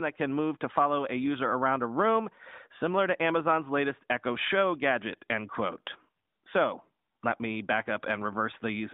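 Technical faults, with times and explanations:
No technical faults are audible.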